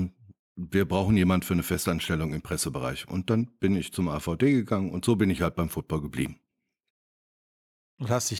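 No technical faults can be heard anywhere in the speech recording; the signal stays steady and intact throughout.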